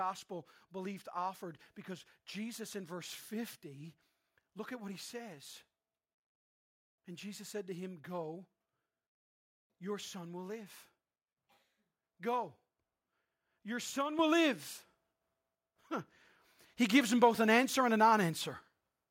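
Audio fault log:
14.19 s, microphone volume stepped up: the whole signal, speech and room noise alike, jumps by about 8 dB in a single step. That's the call software deciding the mic was too quiet and bumping the device's input gain, so everything gets louder at once.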